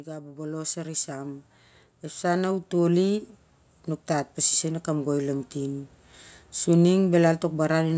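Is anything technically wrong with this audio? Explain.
Yes. There's automatic gain rising, twice: from 0.05 to 1.52 s the level climbs by about 7 dB, then again from 2.2 to 3.29 s by about 5 dB. The gain control judged the input too quiet and turned itself up gradually, so the speech and the background noise swell together over a second or so rather than jumping. The call's microphone processing, which cuts everything above 8 kHz, isn't part of the problem.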